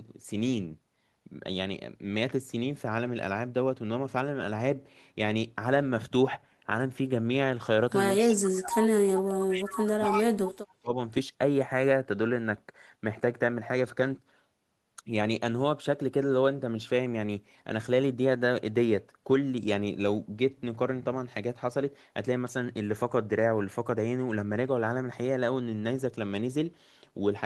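At 8.17 s an echo leak begins and runs to 8.48 s. A faint delayed copy of the speech comes back about 237 ms late, roughly 15 dB below the direct sound. One side is likely playing the call on a loudspeaker, and its echo canceller is not removing what its microphone picks up. From 8.2 to 8.72 s, speech suppressed in double talk follows. The speech dips sharply, by something like 35 dB at its deepest, across about half a second. With both sides active at once, the canceller likely cannot tell the local talker from the echo, so it turns everything down. From 8.99 to 10.96 s the same suppression returns for about two seconds. The speech drops away by a similar depth. Inside that stretch, from 9.71 to 10.24 s, the echo leak comes back at the same 237 ms delay, now much stronger, only about 5 dB under the speech. It is likely the same residual echo slipping past the canceller.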